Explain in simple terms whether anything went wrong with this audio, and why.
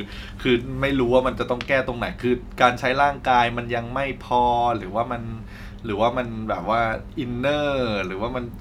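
Nothing went wrong with this speech recording. Listening along its whole length, there is no point where the sound changes in a way that suggests a technical problem.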